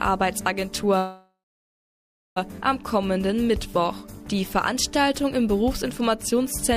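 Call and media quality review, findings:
Call audio freeze, 0.97–2.38 s: last sound held as a fading buzz, then about 1 s of silence, then playback resumes exactly where it stopped. Likely jitter buffer underrun from delayed packets. Unlike packet loss, nothing is skipped; everything after plays 1.39 s late.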